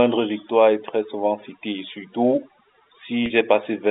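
Speech heard over a telephone-band line with overdone noise removal throughout: the suppressor cuts individual frequency bands whenever they approach its noise estimate, so the background drops and breaks up into twinkling specks and the quieter parts of the voice are removed along with it. At 3.26 to 3.30 s there is packet loss with pitch repetition. About 40 ms of audio is missing, which fits two 20 ms packets, and the gap is bridged by repeating the last pitch period, so it sounds like a brief held, buzzy note before normal speech resumes. The line itself passes roughly 250 Hz to 3.7 kHz, consistent with G.711 telephone coding, with at most faint coding noise.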